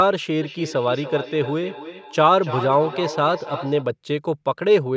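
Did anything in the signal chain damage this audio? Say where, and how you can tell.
Yes. From about 0.4 to 3.9 s the speech comes back on itself roughly every third of a second, each return thinner and more ringing, peaking about 12 dB below the direct speech. That is a feedback echo between two devices: a second device in the room on the same call replays this microphone's signal, which is picked up again, and this device's echo canceller can't remove sound it didn't play. A room reflection would arrive far sooner and wouldn't repeat at a fixed interval like this. The call processing shows in the top end stopping at 8 kHz.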